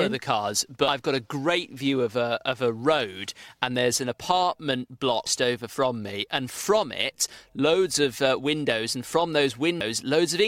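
Three brief bursts of damaged data in a compressed stream occur at 0.88–0.91 s, 5.26–5.30 s and 9.81–9.84 s. Each lasts about 30 ms and is heard as a short chirp or blip where corrupted bytes made the decoder misread frames and resynchronise.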